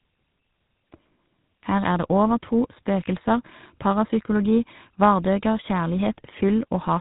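Tandem speech coding runs through the whole clip: the speech was decoded and re-encoded as it crossed links with different codecs, and each coder worked on the already damaged output of the one before. The character points to an ADPCM stage such as G.726 at 32 kbit/s, then plain G.711 mu-law, then GSM full rate at 13 kbit/s. The result sounds rough, muffled and warbly, with nothing above 3.8 kHz.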